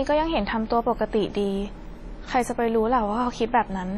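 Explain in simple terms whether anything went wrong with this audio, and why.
Throughout the speech, the sound has a smeared, ringing quality, with a hiss that swells and fades along with the talking, and the very top of the sound is missing, with nothing above about 15.7 kHz. This is heavy WMA compression damage. The likely cause is that the audio was squeezed into a small Windows Media Audio file, where the encoder blurs detail over short stretches of time and discards the quietest parts of the sound.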